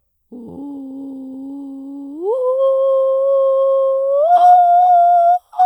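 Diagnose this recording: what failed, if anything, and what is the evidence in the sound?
Nothing in the music points to a failure at any stage, from capture and conversion through to storage and playback.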